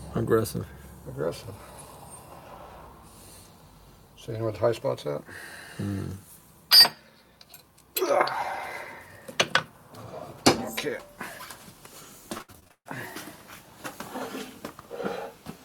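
From 12.37 to 12.87 s the sound turns choppy in a burst of repeated packet loss (robotic sound). Seven gaps arrive in quick succession, each patched by stretching the last received audio forward, so about 60 percent of that half second is concealment rather than real signal. The longest single hole is about 135 ms. Unlike an isolated dropout, which leaves one clean gap, these patches recur back to back, giving a stuttering texture with fragments missing.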